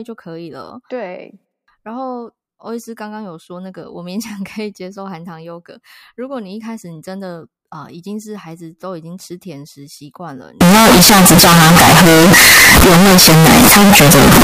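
Speech clip. From 10.61 s to the end, it turns into very loud, harsh distortion. Quiet moments blast too. Likely signed and unsigned mixed up in 16-bit samples.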